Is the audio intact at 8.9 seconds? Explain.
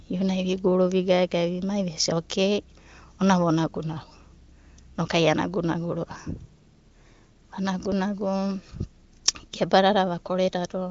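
Yes, the audio is intact at 8.9 seconds: nothing breaks, drops out or distorts there, and the AMR wideband (HD Voice) coding, running at about 23 kbit/s with content reaching up to about 7.3 kHz, leaves at most faint traces at that moment.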